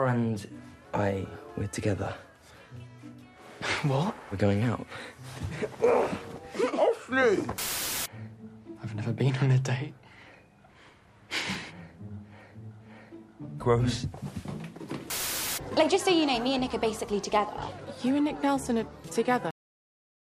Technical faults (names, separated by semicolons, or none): cut-off end